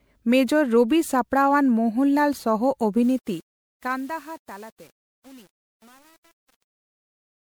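Generation loss runs through the entire speech clip, giving it a swirly, hollow, smeared texture with blurred consonant attacks and almost nothing above 20.9 kHz. The cause is likely repeated lossy coding, with the audio decoded and re-encoded as MP3 about five times at what sounds like 128 kbit/s. Each pass quantises on a shifted frame grid, so the noise and spectral holes accumulate. Truncation distortion on a fade appears from 3.03 s to 7.57 s and is worst from 3.51 s to the end. As the fade-out starting around 3 s pulls the level down, the waveform collapses into a few coarse steps, consistent with an undithered stage holding roughly 8 bits. The tail therefore turns gritty instead of fading cleanly.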